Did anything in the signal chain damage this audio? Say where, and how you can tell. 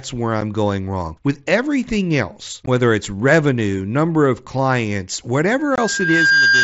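Yes. Bluetooth headset link: unconcealed Bluetooth headset packet loss leaves abrupt silent holes at 0.41 s, 2.66 s and 5.76–5.78 s. Their hard edges, not smoothed fades, fit one, two and three lost 7.5 ms frames.

Acoustic playback loop: from 5.59 s to the end, a loudspeaker feedback squeal at 1.6 kHz swells over about 0.7 s to roughly 5 dB above the speech. Unlike steady electrical whine, it grows on its own.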